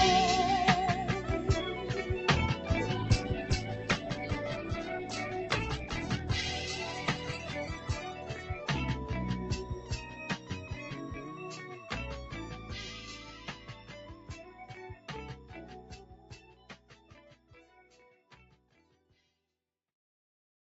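Throughout the clip a noise suppressor applied to music or sounds is at work. It treats held tones, ambience and decaying tails as noise to be removed, so their level keeps dipping by a few decibels while attacks pass through nearly untouched. This makes the sound pump and thin out between onsets. A waveform shows the envelope sagging during sustained passages and recovering at each transient. A spectrogram shows tails cut short and faint, blotchy gaps in the steady energy.

From 2.97 s to 11.29 s there is a call bitrate drop. The encoder's rate falls from 96 kbps to 10 kbps and stays at its lowest for about 3.5 s of that span. The coding becomes coarse, and the sound turns rough and watery, with smeared detail and a muffled top. A spectrogram shows the upper band, already capped near 8 kHz by the call path, thinning further into patchy, quantised blocks. After 11.29 s the detail returns.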